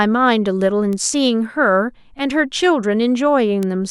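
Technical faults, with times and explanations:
0.93 s and 3.63 s, bit error spike: each is a single sharp tick lasting two samples, peaking at about -14 dBFS and then at about -8 dBFS. A flipped bit made the sample value leap by a power of two and fall straight back, so the tick is broadband and unrelated to the speech. Unlike a dropout click, it leaves no gap in the sound.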